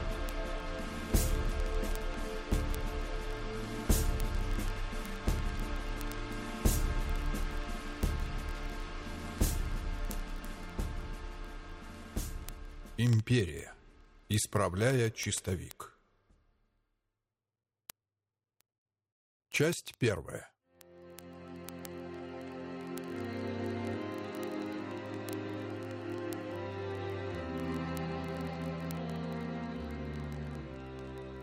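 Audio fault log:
0.10–31.41 s, word clock ticks: a steady stream of sharp clicks of uneven strength, roughly every 20 ms, about fifty a second and some fifteen hundred in all. The receiving device is free-running rather than locked to the sender's clock, and the two drift apart by something like 0.1 percent. Each time they slip past each other, one sample is dropped or repeated and its neighbours misread, and that slip is heard as a tick.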